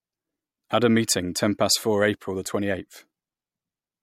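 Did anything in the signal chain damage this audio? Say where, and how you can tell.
No, nothing in the signal chain damaged this audio, and no stage left any audible mark on it.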